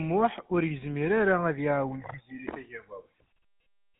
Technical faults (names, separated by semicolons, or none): GSM full-rate codec